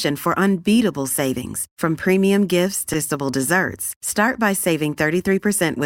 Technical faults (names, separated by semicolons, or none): stream segment skipped